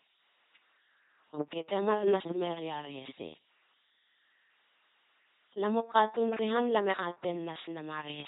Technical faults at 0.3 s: LPC-10 vocoder

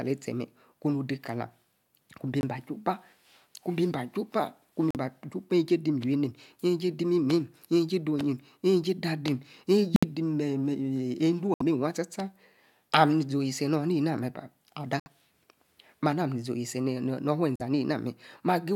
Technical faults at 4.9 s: corrupt frame muted

